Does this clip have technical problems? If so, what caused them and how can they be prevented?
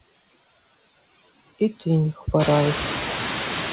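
Yes. Noise suppressor artifacts run through the whole clip. The suppressor cuts bands it treats as steady noise by about 15 dB, so the background dips between phrases and swells under them. This is most audible after the room noise rises by about 16 dB at around 2.5 s. Reducing the room noise at the microphone, or using gentler suppression, would prevent it.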